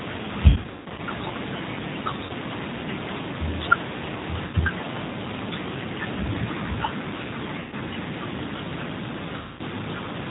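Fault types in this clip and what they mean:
G.729 codec: The speech passes through G.729A at 8 kbit/s, which rebuilds each 10 ms frame from a vocal tract filter, a pitch predictor and a handful of pulses, so the damage is plainly audible: a rough, slightly synthetic texture and no content above 4 kHz. Unlike plain low-pass band limiting, the harshness comes from the coarse pulse model, and it colours the voice all the way through the clip rather than at moments.
VoIP packet loss concealed by the speech codec: Lost packets leave gaps that the decoder fills by extending its last pitch and filter at falling gain, so the voice smears into a buzzy tone or coloured noise that fades, instead of dropping to silence as a clean dropout would. The worst stretch runs from 0.50 to 1.02 s, about 360 ms lost over 480 ms with a longest run of 160 ms. Shorter patches follow at 2.25, 4.47, 7.60 and 9.37 s, the last about 220 ms, each leaving weak, distorted speech briefly afterwards.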